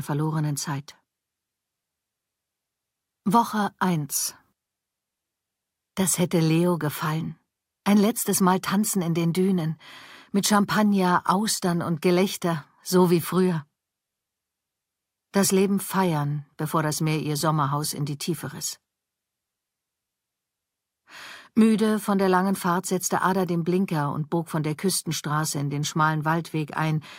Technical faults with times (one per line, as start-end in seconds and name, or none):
none